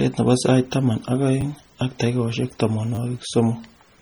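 The speech in this clip has a watery, swirling texture throughout, with smeared consonant attacks and metallic chirps on sibilants. This is likely MP3 compression at heavy damage, consistent with a low bitrate near 32 kbps, where weak frequency lines drop in and out between frames. A repeated buffer occurs at 1.41–1.43 s, between "nebo sait taman ak" and "ak takikaishek", and again at 2.95–2.98 s, just after "ak takikaishek". A roughly 10 ms segment replays two and then three extra times with hard joins, so each event is heard as a brief buzzy stutter rather than a gap.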